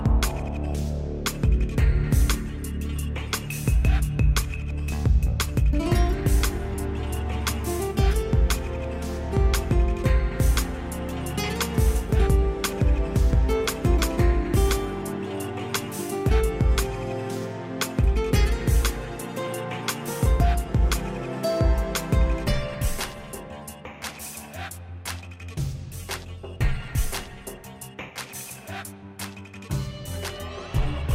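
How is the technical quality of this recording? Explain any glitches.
No glitches or technical faults can be heard here.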